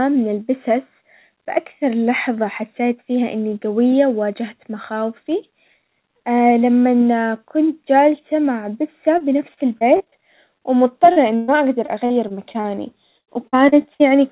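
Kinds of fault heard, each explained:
Repeated packet loss (robotic sound): Three choppy, robotic stretches, 9.18 to 10.14 s after "كنت جالسة مع بسة", 11.86 to 12.66 s and 13.18 to 14.02 s. Lost pieces are patched by continuing earlier sound.
Short concealed packet loss: Brief smears at 10.58 s and 11.12 s. About 20 and 40 ms never arrived and were filled by extending the preceding sound.
Burst of packet loss: At 11.36 s roughly 120 ms went missing together. The last sound was stretched and faded, then audio resumed further along.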